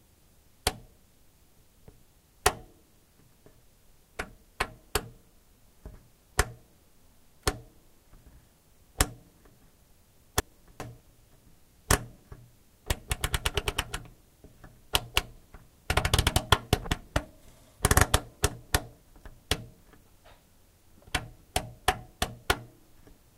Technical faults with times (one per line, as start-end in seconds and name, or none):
10.40-11.00 chunks out of order
19.00-19.40 chunks out of order